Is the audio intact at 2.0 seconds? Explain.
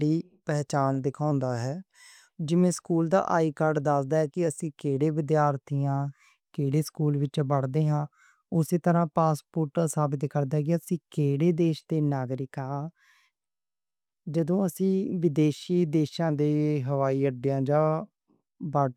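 No. From 1.31 to 2.35 s the speech drops about a semitone in pitch and slows by roughly 5.5%, then snaps back to normal. This is a drift correction step, likely from clock-matching software briefly changing the playback rate to manage its buffer.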